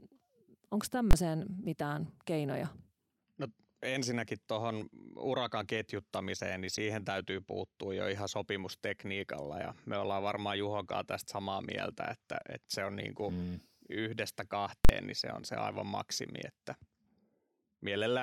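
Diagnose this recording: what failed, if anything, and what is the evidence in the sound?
Sharp bangs at 1.11 to 1.13 s and 14.85 to 14.89 s. The first is a single crack. The second is a loud pop at each edge with silence between. This is invalid numbers at full scale: a processing block produced infinite or invalid values that clipped to maximum. The lengths fit 1024-sample and 2048-sample blocks.

A brief glitch from 6.75 to 6.78 s, peaking around -30 dBFS, points to the codec stage: a corrupt frame decoded. Flipped bits in roughly two compressed frames were played anyway, putting energy at the wrong frequencies for that span.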